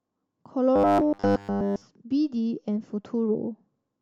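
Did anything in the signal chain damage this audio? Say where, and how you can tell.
Yes: robotic sound from repeated short buffers, 0.76 to 1.82 s. The speech collapses into a rigid metallic buzz at 100 Hz, likely from buffer underruns, with a roughly 10 ms block replayed over the whole stretch instead of fresh audio, overlaying that fixed pitch.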